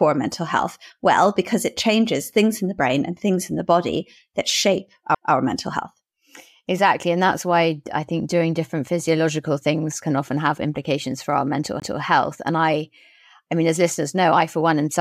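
Speech with two CD skips: at 5.15 s, after "the body that shape" and before "mental health", and at 11.80 to 11.82 s, after "have implications for our". Each is a tick with roughly 10 to 20 ms of muting. The laser then resumes on another turn of the spiral, so unlike a plain dropout, the speech continues from a different point rather than where it left off.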